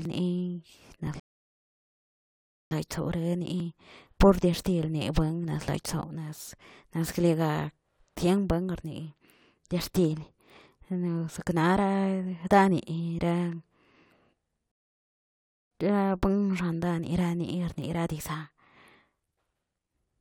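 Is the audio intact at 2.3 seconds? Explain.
No. At 2.3 s playback sits inside a rebuffering stall running from 1.20 to 2.71 s. The player exhausted its downloaded audio and halted, giving about 1.5 s of silence. The speech then resumes exactly where it stopped, so nothing is lost, only delayed.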